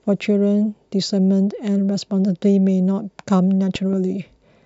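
A loud pop, heard as two sharp thumps in quick succession, lands between 3.75 and 3.95 s in this speech recording, peaking a few decibels above the speech, which carries on underneath without a break. The likely cause is a sudden voltage pulse entering the signal path, from a connector, a switch, a static discharge or a driver glitch, with the circuitry after it shaping the pulse into a short, percussive burst.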